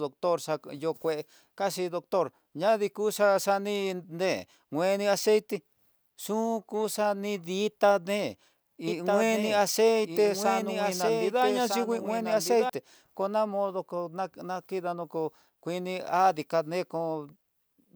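From 8.88 to 12.70 s you get a doubled audio track: a dry copy trails about 1.5 s behind, somewhat quieter, likely from a second, slower capture path.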